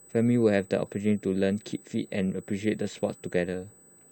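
The speech in this clip carries a steady high-pitched USB whine from start to finish, a fixed tone at 8 kHz, roughly 30 dB below the speech. It comes from the USB bus drawing current in 125-microsecond microframes, and that 8 kHz pulsing leaks into the audio through shared power or ground. A spectrogram shows a thin, unbroken horizontal line at 8 kHz across the whole clip. On the waveform it appears only as a faint, even fuzz during pauses.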